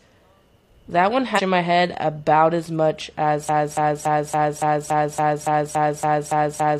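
Right after "that one", from 1.34 to 1.40 s, there's a short blip where damaged data in the compressed stream trips up the decoder. It misreads those frames, loses sync and hunts for the next header, then picks back up at "my head about as".

From 3.49 s, just after "head about as much", it turns into a broken-record loop: a 0.28 s fragment repeats back to back twelve times, right to the end. The stream likely stalled and kept resending its last chunk, so whatever came next is gone.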